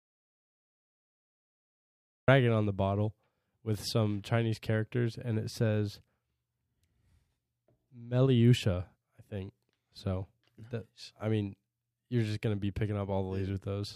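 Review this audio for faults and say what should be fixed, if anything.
The speech opens in an audio dropout to silence from 0 to 2.28 s: silence with no room tone, most likely a lost input or stray mute, and speech enters mid-flow. Unlike a noise gate, nothing leaks through. Monitor input connections and mute states before recording starts.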